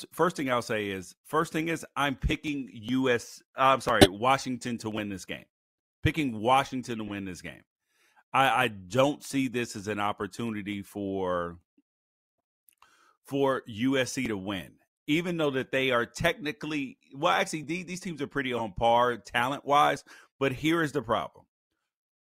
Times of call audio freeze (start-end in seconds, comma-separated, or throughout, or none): none